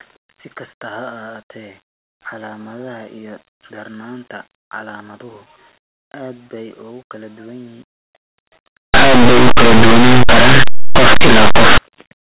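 From 8.94 to 11.78 s, the speech turns into very loud, harsh distortion. This is linear audio read as companded. Plain linear 8-bit samples are expanded as mu-law codes. Small values just to one side of zero jump to maximum output.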